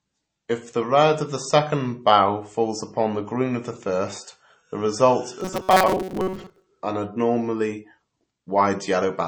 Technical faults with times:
0.00-9.27 MP3 compression
5.41-6.66 robotic sound from repeated short buffers

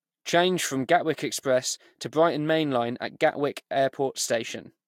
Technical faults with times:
none

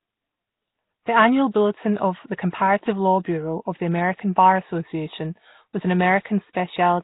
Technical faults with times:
0.00-7.04 Nellymoser compression

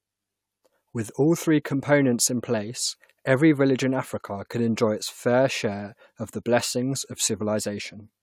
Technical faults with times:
none

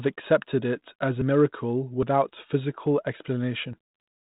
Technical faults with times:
1.22 dropped buffer (overrun)
2.03 dropped buffer (overrun)
2.71 bit errors on an ADPCM link

